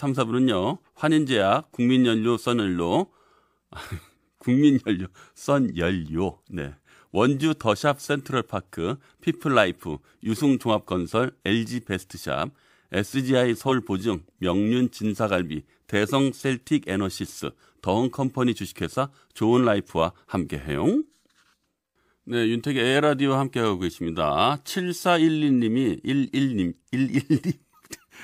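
At 13.68 s the speech jumps forward. This is compressed frames skipped. One block of the compressed stream was never played, either because it was missing from the file or because the decoder rejected it as damaged. The gap fits a single frame of 46.4 ms, so roughly 50 ms of audio is lost.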